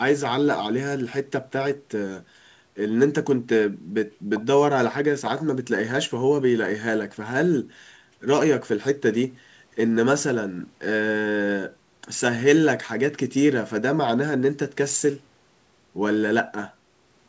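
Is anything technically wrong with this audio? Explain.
No, nothing stood out on listening to this speech, which carries the expected 8 kHz ceiling of a G.722 call path.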